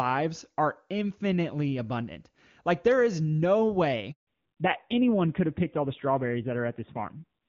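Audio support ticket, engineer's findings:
Handover gap, 4.11–4.27 s: sound fades within a few tens of ms, then 160 ms of silence. Network handover; no speech frames during the switch. Clean cutout with no crackle or partial frames, unlike packet loss concealment smearing.

Fallback to narrowband, 4.27 s to end: content above 4 kHz gone, sound duller and rougher. Codec renegotiated from HD Voice, consistent with AMR-WB near 23.85 kbit/s dropping to AMR-NB around 7.4 kbit/s. Abrupt, persistent band-limit right after the gap, not gradual filtering.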